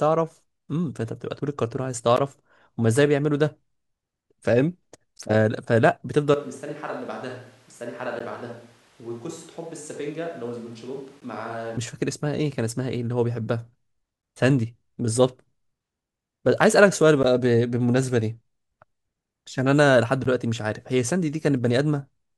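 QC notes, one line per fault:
2.17, 5.18, 8.19, 11.20, 14.22, 17.23, 20.24 s: gap between chunks. A 13 ms hard-edged silence recurs every 3.0 s. Its strict regularity and lack of lost sound distinguish it from dropouts.
6.34–11.77 s: switch to a distant microphone. The sound turns suddenly roomy and thin, about 10 dB quieter, with room noise near 25 dB below, likely from a farther pickup replacing the close one.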